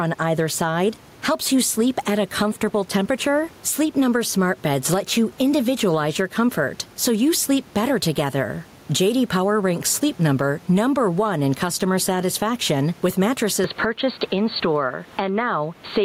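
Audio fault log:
Throughout, gain pumping: the room noise, which sits about 34 dB below the speech, rides a gain swing of around 10 dB, likely from gain set too high with a fast limiter. Unlike steady compression, the breathing follows each sound's onset.
13.64 to 16.04 s, input switched to a poorer device: right after "in customer satisfaction with" the sound turns dull and boxy, with nothing above 4.6 kHz, roughly 5 dB level change and a new noise floor near 35 dB down, with no gap at the switch. This is likely a change of microphone; unlike a plain filter, tone, level and noise all change together.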